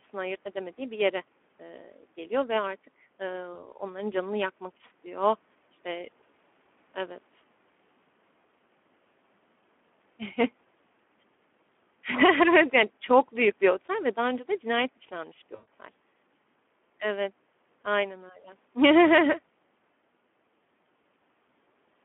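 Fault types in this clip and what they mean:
Speex codec: low-rate CELP coding, consistent with about 11 kbps, leaves the speech hoarse and noisy within a telephone band of 200 Hz to 3.4 kHz.
VoIP packet loss concealed by the speech codec: the decoder extrapolates and fades over missing audio, causing a brief smear at 3.53 s and a longer one at 15.55 s.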